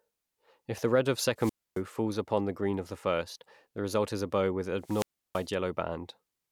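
The wireless microphone's radio signal fades until the receiver's squelch cuts the output: a wireless microphone squelch dropout at 1.37 to 1.81 s, with about 271 ms of near silence, and again at 4.81 to 5.49 s, muting about 329 ms. Each time, hiss rises briefly before the hole and the speech returns.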